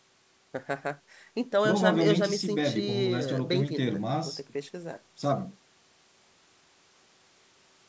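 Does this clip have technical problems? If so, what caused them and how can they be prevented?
No, this clip has no technical problems, so there is nothing that needs preventing.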